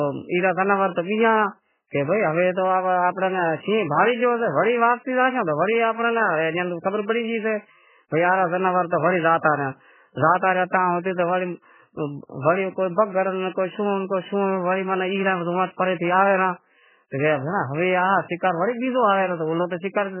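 From start to finish, the speech sounds squeezed: nothing comes through above 3.1 kHz, and what's left has a watery, swirling quality, with s sounds turning metallic and consonant attacks smeared out. That's heavy damage, most likely from MP3 compression starved of bits, which fits an extremely low rate around 8 kbps. The encoder has chopped the treble at a fixed point and keeps switching weak frequency lines on and off between frames, so the texture never settles.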